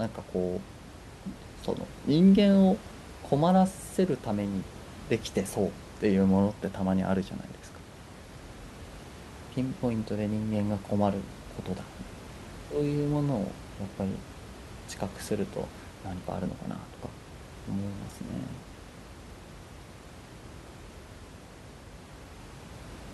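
No technical faults detected.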